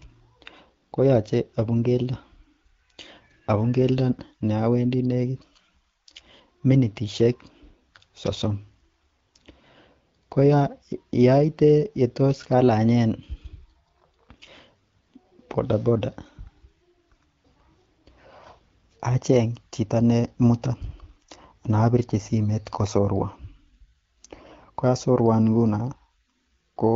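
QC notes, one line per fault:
No faults are present in this speech clip. It carries the sound of the AMR wideband (HD Voice) codec at 12.65 kbit/s, with the band ending near 7 kHz and only light coding damage.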